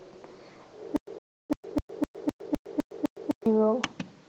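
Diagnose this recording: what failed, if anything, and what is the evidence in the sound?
Codec stage: Opus voice compression runs throughout. The speech sounds muffled, hoarse and slightly robotic. Energy still reaches about 20 kHz, so the band is not narrowed. Coarse excitation coding in the hybrid mode causes the damage, which fits a bitrate around 16 kbps.

Playback stage: stutter with silent gaps from 0.96 to 3.46 s. A 145 ms fragment repeats eight times, each followed by 110 ms of digital silence, on a 255 ms cycle. The likely cause is a stream stalling and replaying its last fragment at every retry.

Playback stage: a playback stall from 1.18 to 1.50 s. The sound stops dead for about 310 ms, then resumes. The likely cause is the player running out of data, or its thread being blocked, until the output recovered.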